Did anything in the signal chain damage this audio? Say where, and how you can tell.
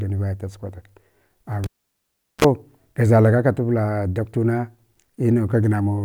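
Yes: a cable pulled and plugged in at the analogue wiring, 1.64 to 2.45 s. A pop, roughly 0.76 s of near silence, a 35 ms burst of 60 Hz buzz, then another pop.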